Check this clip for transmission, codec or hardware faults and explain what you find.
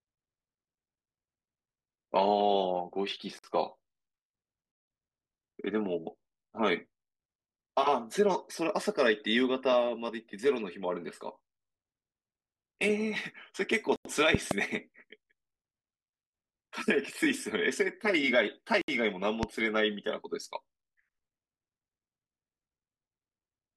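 A few faults show up: three dropouts to digital silence and two loud pops.

Blocks of digital silence hit at 3.39 to 3.44 s (about 50 ms), 13.96 to 14.05 s (about 93 ms, which fits a 4096-sample buffer) and 18.81 to 18.88 s (about 68 ms). The output buffer likely wasn't filled in time, so zeros went out instead. Each one cuts out and back hard, with no fade.

Loud pops land at 14.35 to 14.53 s, a pair of them roughly 15 dB above the speech, and at 19.43 s, a single pop roughly 20 dB above. They're sharp spikes sitting on top of the speech, which carries on underneath, likely from a voltage step caused by static, a switch or a driver glitch.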